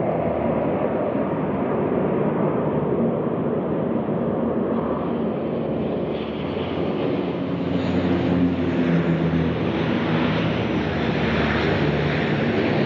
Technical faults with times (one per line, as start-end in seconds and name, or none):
none